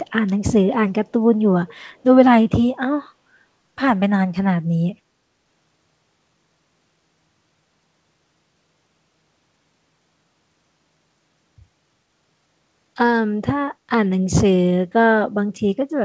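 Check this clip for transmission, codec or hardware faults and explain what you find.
One fault stands out, a faint echo leak from 1.67 to 2.03 s. A delayed copy of the speech trails the original by 388 ms, roughly 30 dB down, most likely loudspeaker sound that the far end's echo canceller failed to remove. On a spectrogram it appears as a weak repeat of the preceding harmonics. Throughout the clip, nothing appears above 8 kHz, which fits a wideband call codec such as G.722.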